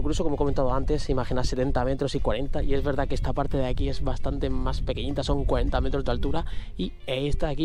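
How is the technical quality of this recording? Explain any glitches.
Nothing stood out as a technical problem when I listened to the recording.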